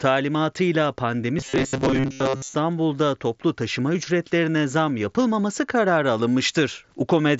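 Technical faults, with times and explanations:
1.39–2.54 s: robotic sound from repeated short buffers. The speech turns into a rigid metallic buzz at 133 Hz just before "toplu taşıma ücretlerine zam". That pitch fits a roughly 7.5 ms segment looped over most of the span, likely because new audio arrived too seldom.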